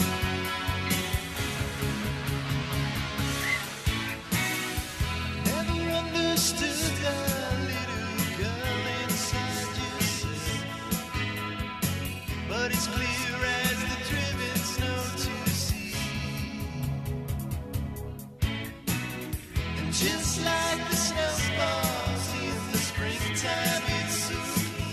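No technical faults can be heard anywhere in this recording.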